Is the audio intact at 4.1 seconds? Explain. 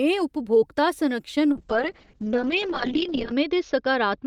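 No. A call bitrate drop from 1.52 s to the end cuts the encoder from 48 to 6 kbps and bandwidth from 20 kHz to 8 kHz, so speech turns muffled and watery, unlike a clean low-pass filter.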